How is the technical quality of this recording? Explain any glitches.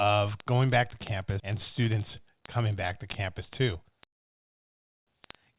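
The recording has three glitches: a steady ticking through nearly the whole clip, one abrupt jump, and a hurried final stretch. All of it sits on narrowband call audio with nothing above 4 kHz.

Word clock ticks run from 0.11 s to 5.58 s. A digital link is being read by a device on its own clock, not locked to the sender's. The two clocks disagree by roughly a tenth of a percent, so they slip past each other about every 20 ms. At each slip a few samples are misread and a single sample is dropped or repeated. Around three hundred sharp ticks result, spaced evenly but varying in strength.

A skip ahead occurs at 1.40 to 1.42 s. Later audio was already queued when a stretch of roughly 0.4 s was discarded, either in transit or by an overflowing jitter buffer. Nothing fills the hole. The sound on either side is spliced almost directly together, so the speech lurches forward with that portion simply missing and the playback delay drops by about the same amount.

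A jitter buffer speed-up runs from 3.41 s to 5.22 s. The buffer was holding more audio than its target, so the receiver trimmed short pieces, each one or a few pitch periods long, again and again. Around 0.2 s was removed in total. The speech plays at about 109 percent speed while keeping its pitch, which makes this passage sound rushed.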